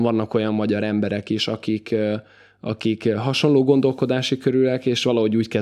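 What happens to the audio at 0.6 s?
Nothing goes wrong at 0.6 s; the speech runs on intact there, with no dropout, click, distortion or other fault.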